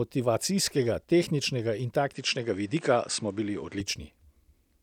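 At 2.14 s the speech turns duller in an instant. Nothing above 9 kHz gets through until 3.80 s, when the full brightness returns. There is no gap at either change, and the loudness stays about the same. A new, faint background noise appears, roughly 35 dB below the speech. This is likely an input switched to a poorer device, a narrower-band microphone with its own noise floor, before the original input came back.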